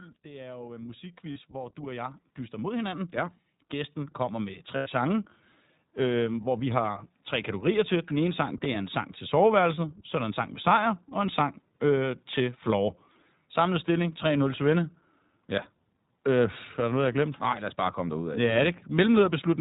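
The whole clip goes through the iLBC codec, so nothing reaches above 4 kHz and the speech comes across slightly rough and synthetic, which fits its 20 ms frame mode. From 0.22 to 5.31 s the automatic gain keeps rising, pushing voice and background up together by about 17 dB as it decides the input is too quiet. Inside that swell come lost iLBC frames at 1.32 to 1.38 s (40 ms) and 4.76 to 4.88 s (100 ms). The decoder fills each gap by repeating the last pitch cycle with noise, so you hear a brief held, buzzy vowel, longer and fading on the second, before the voice snaps straight back.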